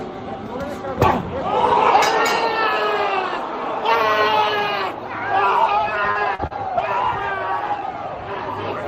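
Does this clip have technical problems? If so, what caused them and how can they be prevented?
Yes. Lost packets rebuilt from error correction occur at 5.89 s, 6.15–6.17 s, 6.19–6.21 s, 6.79 s and 6.85 s, each covering 20 ms. In each case a packet went missing, but the following packet carried a low-bitrate duplicate of it, and the decoder played that copy instead of leaving a hole. Nothing drops out, but those brief stretches turn grainier and noisier than the surrounding audio. Keeping the network path free of loss is the real fix, with in-band error correction left enabled as the safety net.

Short concealed packet loss occurs at 6.11–6.17 s, 6.35–6.41 s and 6.47–6.52 s. Each time about 40 ms of audio failed to arrive in time, and no backup copy was available. The receiver extended the last sound it had, as a pitched continuation or as shaped noise, for roughly 36–38 ms and then crossfaded back into real audio. 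The result is a brief smear or wobble, clustered with the rebuilt packets in a lossy burst. A larger jitter buffer and a more stable connection would prevent it.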